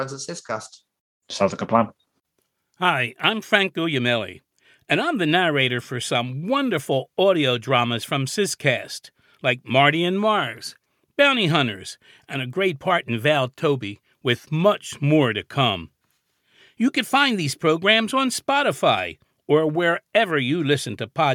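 Nothing in the speech recording signals a technical fault; the signal stays continuous and stable throughout.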